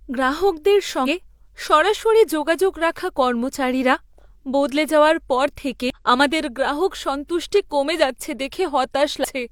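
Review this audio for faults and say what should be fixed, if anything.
Damaged data in a compressed stream is heard three times in the speech: 1.03–1.08 s, 5.90–5.96 s and 9.20–9.26 s, each a short chirp, squawk, click or hole lasting about 55–60 ms. Corrupted bytes in the encoded stream make the decoder misread those frames and lose sync until it finds the next valid frame header. On a spectrogram each event is a narrow vertical discontinuity; the waveform shows an abrupt break in the surrounding envelope. Checksums on stored or transmitted frames, with retransmission or a re-copy from an intact source, would prevent it.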